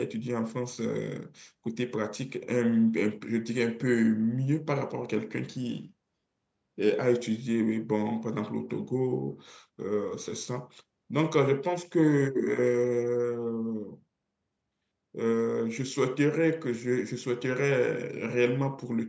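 Speech that has passed through a call's microphone processing, which leaves no content above 8 kHz and trims the lowest bass as intended, with no technical fault anywhere in it.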